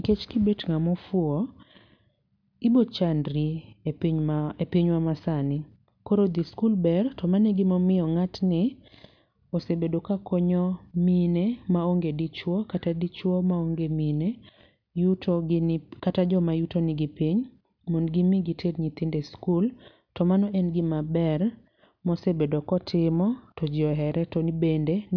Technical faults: none

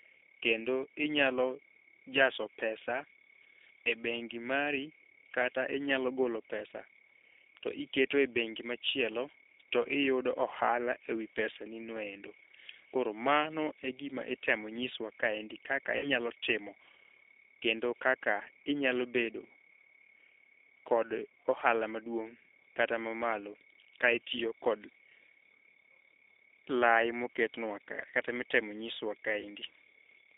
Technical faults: G.729 codec; VoIP packet loss concealed by the speech codec

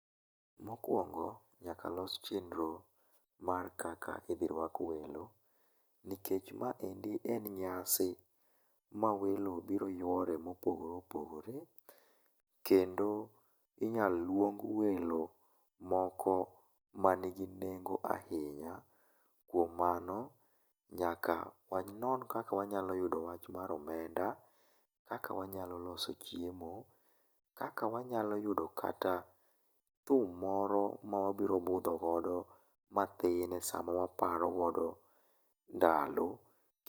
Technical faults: none

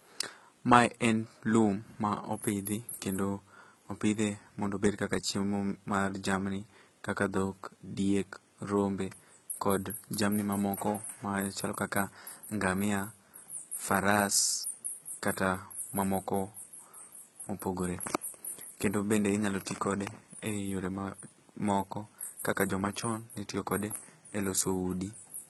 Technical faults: HE-AAC compression

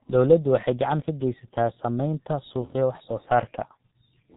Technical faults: G.723.1 codec

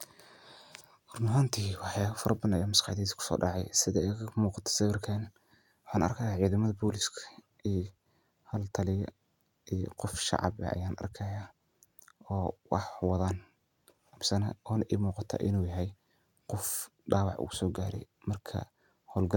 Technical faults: none

